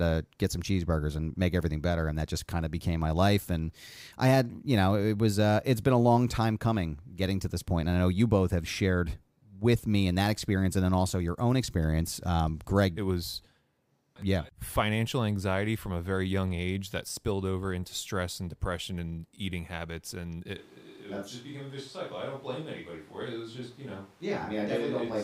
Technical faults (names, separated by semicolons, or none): switch to a distant microphone